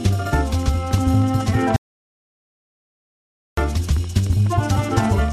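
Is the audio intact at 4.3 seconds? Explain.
Yes, the audio at 4.3 s plays through cleanly, with no dropout, click, distortion or other fault at that point.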